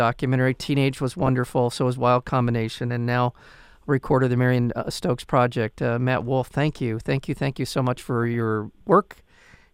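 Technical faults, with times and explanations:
1.22 to 1.49 s and 8.23 to 8.34 s: DAB burbling. The speech is broken by burbling in both places, the second burst shorter. Weak reception let bit errors slip past the error correction into the MP2 audio data. The error rate was only a fraction of a percent, but it was enough. Corrupted samples put short blips of noise into single sub-bands. The run of damaged frames, roughly a dozen each time, gives the burbling.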